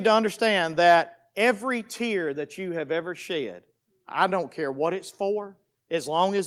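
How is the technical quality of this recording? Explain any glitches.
Two glitches stand out, both within the first second and a bit.

From 0.86 to 0.96 s, just after "to understand" and before "every tear that you", the loudest part of the speech turns harsh and crackly, with a gritty edge on the peak. This is microphone overload, likely from an input level set too high: the waveform pushes about 3 dB past the converter's ceiling, so a small share of samples have their tops flattened, and that squared-off shape produces the rasping distortion.

At about 1.02 s, in the same gap between "to understand" and "every tear that you", the whole signal, voice and background alike, drops abruptly by about 2 dB. This is the microphone volume being stepped down, likely by call software reacting to the clipped peak a moment earlier and lowering the device's input level in one jump rather than gradually, so the level shift is heard as a sudden step.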